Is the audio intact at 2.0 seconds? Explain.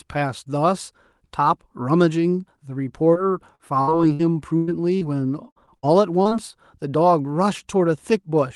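Yes, the speech is intact at 2.0 seconds, with no dropout, glitch or other fault at that point, only the ordinary sound of a call path running normally.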